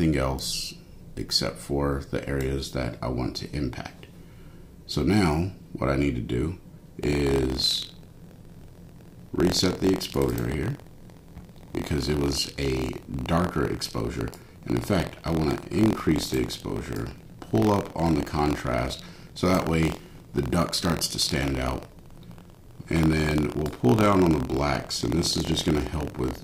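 From 7.01 s onward, buffer tearing: ring-buffer writer and reader cross each period, splicing stale audio, causing a 43.1 Hz rattle that fits 1024-sample buffers.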